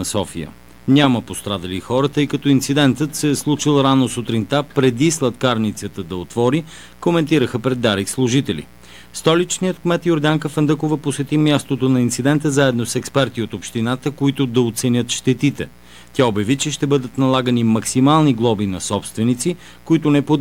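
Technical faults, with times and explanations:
Throughout, mains buzz: there's a steady, raspy buzz sitting about 30 dB under the audio for the whole clip, built on 60 Hz mains. It's the spiky kind you get when something like a dimmer, a rectifier or an unshielded line injects sharp switching pulses, two per mains cycle, so 120 a second. Those pulses are rich in harmonics of 60 Hz reaching up into several kHz, which is why it rasps rather than hums.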